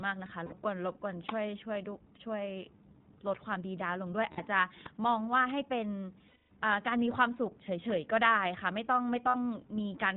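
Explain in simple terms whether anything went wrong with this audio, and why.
Two things went wrong, both tied to internet voice calling.

The whole clip went through the iLBC codec, a compression scheme built for phone calls over the internet. It keeps only the lower part of the sound, nothing above 4 kHz, so the speech sounds muffled and phone-like. It also rebuilds each short slice of sound from a simplified model, which is why the voice has a plainly audible rough, slightly synthetic edge from start to finish.

There are also lost iLBC frames, where chunks of data never arrived. The decoder filled each hole by repeating the last bit of voice it had, mixed with some noise, so the gap sounds like a held, faintly buzzy vowel. This happens at 0.46–0.54 s, 4.32–4.40 s and 9.28–9.37 s, each about 60 ms long, which fits a few of the codec's 20 ms chunks. The longest gap is at 6.28–6.52 s and lasts 220 ms, where the held sound fades out. 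After each gap the voice snaps back almost immediately, because every chunk is decoded on its own.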